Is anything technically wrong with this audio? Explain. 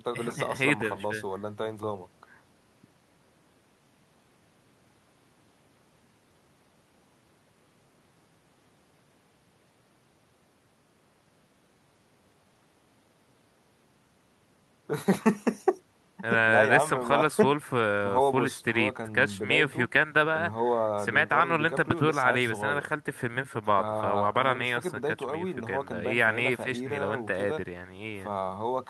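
No, nothing technically wrong stood out on listening to this speech recording.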